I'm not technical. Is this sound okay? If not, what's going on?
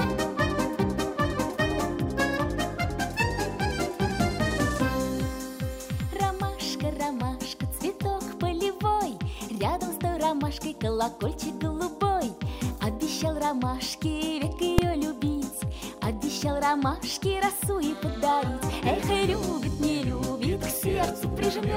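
No. At 14.78 s there is a single sharp bang. This is invalid numbers at full scale: a calculation failed and its result was pushed to the loudest possible value for a very brief block, which fits a 128-sample processing chunk.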